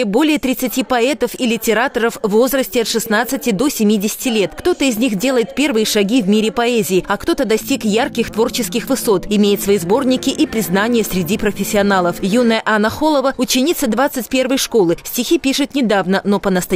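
Listening closely across the whole recording, nothing in the signal points to a technical fault at any moment.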